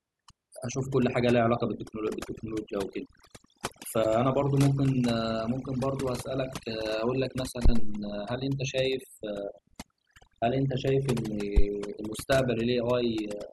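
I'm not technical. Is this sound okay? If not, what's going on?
No. There are three problems.

The whole recording has overdone noise removal. A cleanup tool was set far too strong, so it switches off parts of the sound that look like background hiss, and the quieter parts of the speech get cut along with it. The background drops and breaks up into twinkling specks. Ordinary hiss is steady, while this sounds bubbly and keeps changing.

At about 4.01 to 4.05 seconds there is damaged data in a compressed stream. A small piece of the stored file was corrupted, so the player misread it and had to find its place again. You hear a brief chirp or blip, and the audio may skip slightly ahead. A simple click is a single tick, but this can jump forward.

Phantom power thumps occur at about 7.65 to 8.05 seconds and again at 11.57 to 11.64 seconds. Power to the microphone was switched on or off while it was recording, and that sudden jump came through as a deep low thud. 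The first thump dies away over about 89 milliseconds and the second over about 16 milliseconds. Unlike a click, this is a low, heavy bump rather than a sharp high tick.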